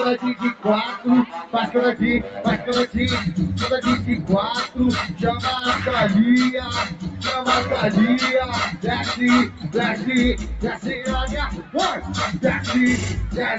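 A speech-oriented noise suppressor stays active on this sound for the whole clip. It treats sustained tones, ambience and decaying tails as noise and turns them down, so the level swings by around 10 dB as attacks pass and held parts sink, giving a pumping, thinned character. The call chain also limits the audio to 8 kHz, which fits a wideband Opus path.

On top of that constant behaviour, the suppressor cuts the sound hard at six points, each lasting a few tenths of a second. The drops are about 9 dB at 0.35–0.65 s, about 9 dB at 1.26–1.54 s, about 6 dB at 2.23–2.41 s, about 9 dB at 6.85–7.23 s, about 8 dB at 9.48–9.71 s and about 9 dB at 11.54–11.75 s. In each spot a steady or fading part of the sound briefly sinks or has its decay clipped short, then recovers.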